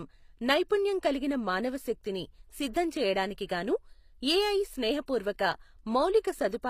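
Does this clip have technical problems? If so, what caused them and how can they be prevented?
Yes. Throughout, the treble sounds synthetic and nothing lies above 15.4 kHz. HE-AAC compression is the likely cause, with upper bands copied from lower ones. Encode at a higher bitrate, or use plain AAC or Opus for speech.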